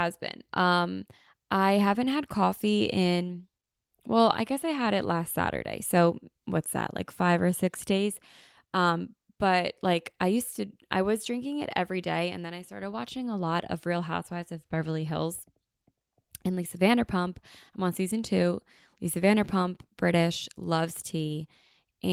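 No technical faults can be heard anywhere in this recording of speech.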